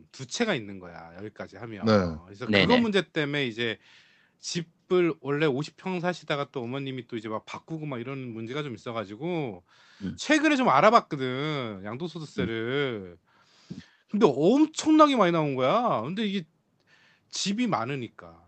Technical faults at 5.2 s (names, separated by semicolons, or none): none